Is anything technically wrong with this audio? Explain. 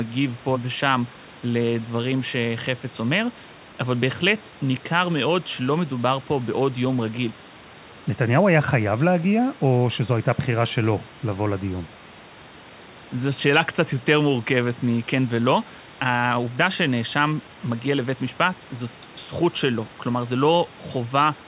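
No, nothing here is technically wrong with this audio.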